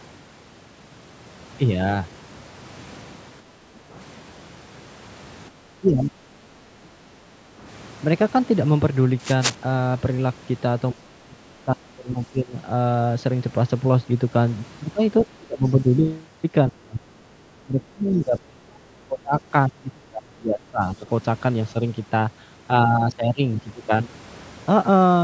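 At 3.47 to 3.91 s and again at 6.89 to 7.14 s, the background is gated by the echo canceller: while far-end audio plays, it pulls the microphone down by about 7 dB, so the room tone briefly dips, then recovers. Between those, at 5.8 to 6.12 s, the talker dips by roughly 15 dB, likely speech suppressed in double talk. From 9.2 to 9.55 s a burst of cable scratch noise, only a little below the speech, rasps over the sound, likely from a loose connector. The double-talk suppression returns at 10.94 to 12.54, 15.22 to 16.08, 16.71 to 17.25, 17.64 to 19.37 and 19.68 to 21.08 s. These dips are deep, around 25 to 35 dB, and pull the talker down. The call microphone path carries nothing above 8 kHz.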